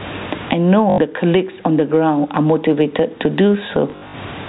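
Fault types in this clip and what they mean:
Gain pumping: The level is squashed and breathes, likely from gain set far too high with a fast limiter pulling it down on each loud syllable. The room noise sits about 39 dB below the speech, and the gain swings around 25 dB.
Packet loss with last packet repeated: Lost audio is filled by replaying the previous chunk, giving robotic stutters. At 0.9–0.98 s, 80 ms repeats, consistent with four 20 ms packets. At 3.9–4.14 s, 160 ms is lost in scattered runs over 240 ms, the longest 60 ms.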